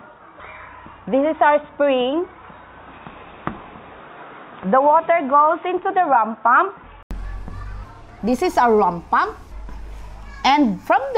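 From the start up to about 7.11 s, the sound is dull and boxy, with nothing above 3.8 kHz and a faint background noise sitting well below the signal. Then there's a short gap of about 80 ms, and the audio opens up, clearer and a few dB different in level. That's the signature of an input switched to a poorer device, most likely a narrowband headset or secondary mic that was in use until the system changed back.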